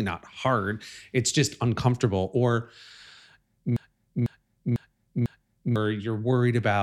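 Speech with a broken-record loop from 3.76 to 5.76 s: a 0.5 s fragment repeats exactly four times, back to back, likely from a stalled player or stream resending its last buffer. Unlike echo, the repeats don't decay, and the intervening speech is lost.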